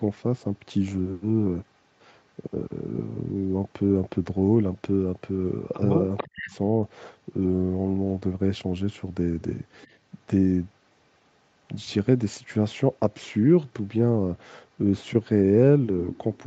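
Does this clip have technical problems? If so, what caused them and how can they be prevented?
Yes. Echo leak at 6.17 to 6.51 s and again briefly at 9.82 to 9.87 s: a delayed copy of the speech returns about 442 ms late, around 10 dB below the talker in the first case and barely audible, about 35 dB down, in the second. This is likely a loudspeaker on the far end whose echo canceller let part of its microphone pickup through and sent it back. Using a headset, or giving the canceller more time to converge on the room, prevents it.

Speech suppressed in double talk at 6.24 to 6.55 s: the talker's speech dips sharply, by roughly 40 dB at its deepest, over about a third of a second, overlapping the echo burst. The likely cause is an echo canceller that could not tell its own talker from the loudspeaker return while both sides sounded at once, so it turned everything down. A headset or a canceller with better double-talk detection prevents this.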